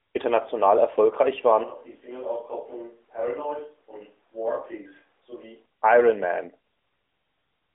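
From 1.64 s to 5.66 s the recording likely switches to a distant microphone in place of the close one. The speech turns suddenly roomy and hollow, thinner in the bass, roughly 10 dB quieter, with faint room noise, then snaps back at the end.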